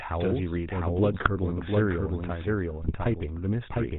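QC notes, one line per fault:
throughout: doubled audio track. A second, equally loud copy of the speech trails by roughly 0.7 s, clean and dry, most likely a second capture path or a misaligned edit.
throughout: GSM full-rate codec. The speech has that buzzy, gravelly roughness and nothing above 4 kHz, which fits a 13 kbps GSM full-rate link.
1.12–1.28 s and 2.82–2.94 s: GSM bit errors. Short bursts of squawks and gargling where corrupted filter, pitch or gain values reached the decoder and warped those frames.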